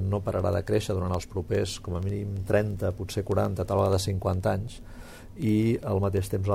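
Sharp, uneven ticks recur roughly every 70 ms from 0.12 to 6.51 s: word clock ticks, where an unlocked receiver clock, off by around 300 ppm, drops or repeats single samples.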